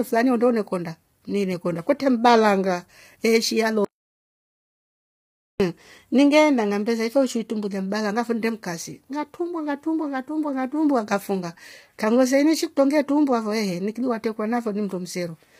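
Throughout, the speech sounds heavily rough and grainy, with nothing above 15.6 kHz. This is likely low-delay AAC compression, and its short frames fit AAC-ELD at about 24 kbps.

From 3.85 to 5.60 s, after "kwetre mbalanga neeshi", there is an audio dropout to silence: 1.75 s of silence with no room tone. The signal resumes mid-flow at "iningeenda ngambesa ife uishi", likely after the input was briefly lost.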